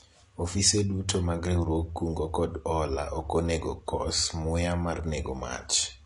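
From start to finish, the speech has been squeezed through what is likely AAC compression at a low bitrate. The codec's hearing model has starved the spectrum of bits, which fits an AAC-LC stream at around 32 kbps. The effect is plainly audible: nothing survives above 11.1 kHz, so the top end is dull. Sibilants turn fizzy and smeared, and sustained sounds pick up a warbling texture.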